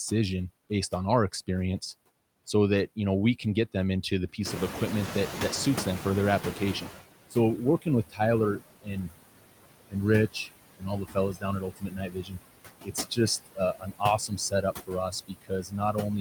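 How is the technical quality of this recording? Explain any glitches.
The speech is processed by a noise suppressor, with audible residue, a lag when the background changes, and several stretches where speech is turned down.

Noise suppressor artifacts run throughout. Background is cut by about 20 dB between words and rises under them. A spectrogram shows patchy, flickering noise between speech bands.

Noise suppressor catching up happens from 4.45 to 7.01 s, right after "get them into the". Room noise jumps about 16 dB at around 4.5 s and ends up about 11 dB below the speech. The suppressor's estimate takes 2.56 s to follow, so the noise first passes with little reduction, then sinks by about 15 dB. On a waveform, the noise floor steps up and then slowly settles.

Speech cut by the noise suppressor occurs at 7.3–8.2 s, 8.59–9.15 s, 10.32–12.37 s and 12.84–15.97 s, with drops of about 17, 19, 22 and 20 dB. 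The suppressor treats quiet parts of the speech as noise, so they sound swallowed. In the first two spans this adds up to a fraction of a second, and in the last two to about a second each. The spectrogram shows gaps cut into the speech energy.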